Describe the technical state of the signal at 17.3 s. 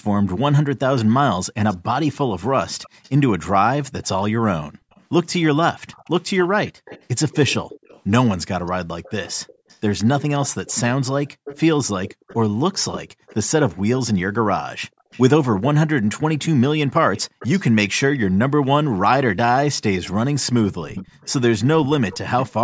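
A faint delayed copy of the speech trails the talker by about 259 ms, well below the main level. This echo leak runs from 15.11 to 18.18 s, likely from a far-end loudspeaker whose echo canceller let some of its microphone pickup return.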